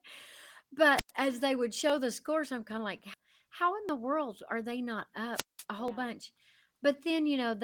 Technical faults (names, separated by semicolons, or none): wireless microphone squelch dropout; audio missing between chunks; skip ahead; jitter buffer speed-up